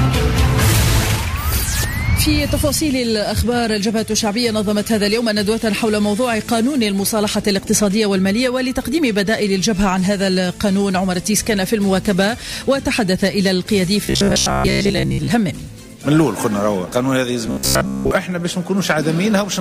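Audio likely arrived too seldom to keep the output fed, so the playback filled the gaps by looping a short stretch of about 15 ms while most of the real signal went missing. The result is robotic sound from repeated short buffers, first from 14.06 to 15.30 s and again from 17.47 to 18.11 s. Both times the sound turns into a rigid, metallic buzz locked at 66.7 Hz, loosely tracing the original underneath.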